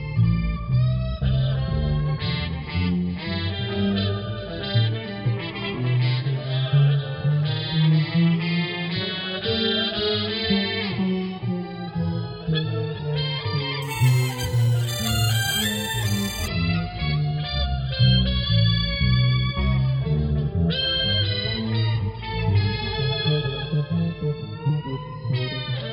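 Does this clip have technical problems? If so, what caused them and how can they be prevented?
Yes. From 13.82 to 16.48 s there is imaging from sample-and-hold upsampling: audio at about 11 kHz was raised to 44.1 kHz by repeating each sample with no smoothing filter. Mirrored copies of the spectrum fold upward from about 5.5 kHz and around 11 kHz, heard as a bright metallic fizz about 14 dB below the sound, rising and falling with its level. On a spectrogram, the content appears reflected above 5.5 kHz and repeated at multiples of 11 kHz; the waveform shows staircase steps. To prevent it, resample with a proper interpolating low-pass filter rather than sample repetition.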